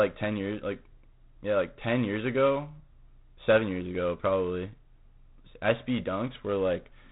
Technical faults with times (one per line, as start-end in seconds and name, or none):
0.00-7.12 G.726 ADPCM